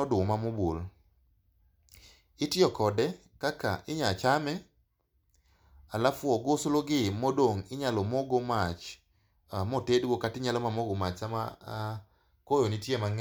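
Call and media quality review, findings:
No audible defects found on the speech path; nothing to raise against capture, transport or playback.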